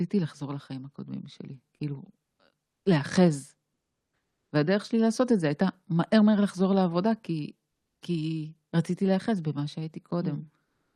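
Speech clip in which the background during pauses at 3.73–4.51 s, 7.71–8.01 s and 10.65 s to the end becomes steady, featureless comfort noise, about 3–5 dB quieter, likely from Opus DTX. Unlike a noise gate, the gap is filled with hiss, not silence.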